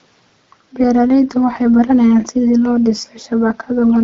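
No technical faults appear in this speech: the faint room noise sits about 42 dB below the talker, and the band-limited, lightly coded character fits AMR wideband (HD Voice) at around 12.65 kbit/s.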